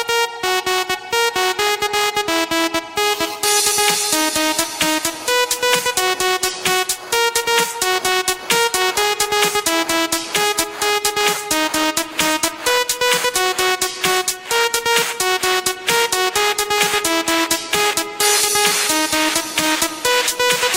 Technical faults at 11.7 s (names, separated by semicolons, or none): none